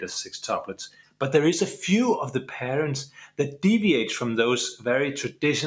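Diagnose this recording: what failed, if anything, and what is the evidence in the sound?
In the call processing stage, a noise suppressor built for speech was left on for this non-speech audio. It treats steady tones, ambience and decay as noise, so the level pumps by around 10 dB throughout. Attacks pass while sustained sound and tails sink.

The clearest evidence is two places where the noise suppressor cut the sound: 0.89 to 1.21 s and 3.07 to 3.39 s, each about a third of a second long. Level drops by about 18 dB at the deepest, pulling held or fading material down. The microphone chain's normal band limit, nothing above 8 kHz, is also present.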